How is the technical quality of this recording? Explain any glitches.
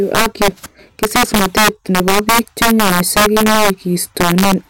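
The recording is damaged by integer overflow throughout. Gain about 6 dB too high wraps a small share of loud peaks to the opposite sign, giving violent cracks far sharper than clipping's flattened buzz.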